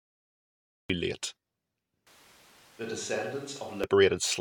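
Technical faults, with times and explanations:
0.00–0.90 s, cut-off start: the clip holds digital silence, then sound begins abruptly at 0.90 s partway through a sound, with no attack or fade. The waveform shows a flat line meeting sudden sound, and the spectrogram a blank stretch ending in a sharp vertical edge.
2.07–3.84 s, switch to a distant microphone: the speech suddenly turns roomy and hollow, thinner in the bass and about 10 dB quieter, with room noise roughly 25 dB below the speech. This is likely a pickup further away. The waveform steps down, and the spectrogram loses low-frequency energy and shows a raised noise floor.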